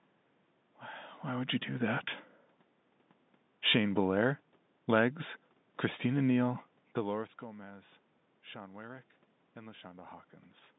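Nothing here counts as a technical fault: the narrow telephone band, the room noise in the background and the level shifts around 1 s and 7 s, where the talker seems to move relative to the microphone, are all just part of an ordinary call.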